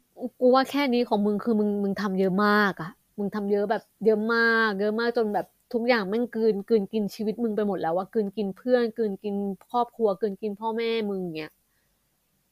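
Speech recording; no technical faults found.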